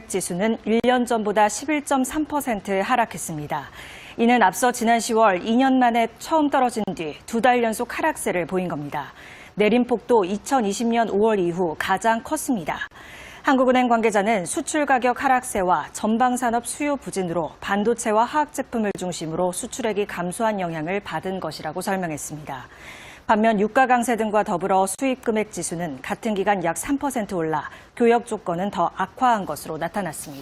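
Short silences cut into continuous sound at 0.80, 6.84, 12.88, 18.91 and 24.95 s, each about 37 to 40 ms, repeating every 6 s. These are gaps at joins of encoded pieces: separately encoded segments were joined with their encoder delay and end-frame padding left in.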